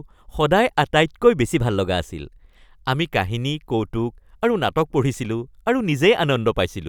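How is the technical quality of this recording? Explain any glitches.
The recording has one clear glitch, a drift correction step, from 1.45 to 2.00 s. For about half a second the speech runs roughly 5.5% fast and sits about 93 cents sharp, nearly a semitone, then snaps back to normal. This is likely clock-matching software abruptly raising the playback rate to drain its buffer. On a spectrogram the harmonics jump upward together as a block and drop back at 2.00 s. The waveform looks slightly compressed in time over that stretch.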